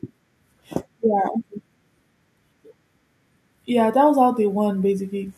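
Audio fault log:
3.66–5.33 s, automatic gain rising: the speech and the room noise behind it swell together, climbing about 4 dB over roughly a second and a half, so the level creeps upward rather than jumping. This happens because the automatic gain control judged the incoming signal too quiet and slowly raised its gain. Since it amplifies everything at the input, the background rises in step with the voice instead of the voice alone getting louder.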